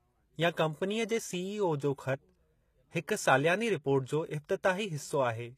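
Across the whole speech clip there is plainly audible codec damage, likely from HE-AAC compression at a rate that fits roughly 20 kbps. Only the lower spectrum carries real detail. The treble is rebuilt by spectral band replication, so harmonics fail to line up across the crossover, and s sounds come out gritty, metallic or lispy. On a spectrogram the upper band looks like smeared, repeated copies of lower structure, and there is nothing above 14.9 kHz.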